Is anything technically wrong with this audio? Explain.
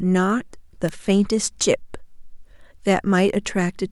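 Yes. A single electrical switching spike lands at 0.89 s in the speech. It is a sharp, dry snap lasting about a millisecond and sitting on top of the sound, with a peak of about -15 dBFS. The likely cause is a nearby switch, motor or static discharge arcing briefly and being picked up by the audio line. On a waveform it appears as one thin vertical spike. On a spectrogram it is a narrow broadband stripe running from the low end up through the kHz range.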